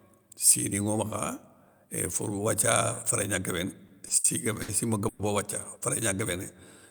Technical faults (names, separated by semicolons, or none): short stall from a late packet; call audio freeze